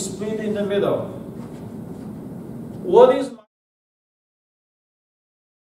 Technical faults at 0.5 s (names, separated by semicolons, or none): none